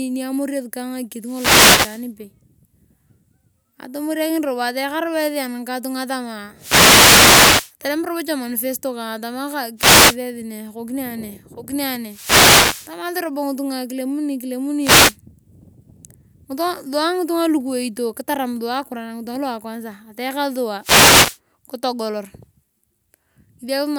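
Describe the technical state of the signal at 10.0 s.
At 10.0 s the speech is hit by a brief swish of static that rises from about 9.77 s, just after "manifesto kang atama", and clears by 10.17 s, before "esi ne". This is a wireless microphone noise hit: the analogue FM radio link faded for roughly 0.4 s as reflected signals cancelled the direct one, so the receiver's own hiss swelled up until the signal recovered.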